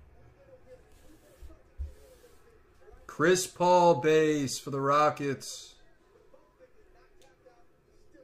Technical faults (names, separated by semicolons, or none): none